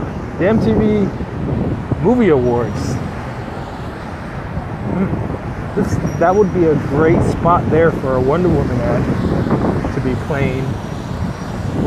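At 11.17 s the sound jumps ahead, the kind of fault a dropped buffer (overrun) produces: the likely cause is samples being overwritten before the program collected them, so a sliver of roughly a millisecond and a half is missing and the two sides are spliced directly. On a waveform this shows as an abrupt step with no gap of silence; a spectrogram shows a thin vertical broadband line at that instant.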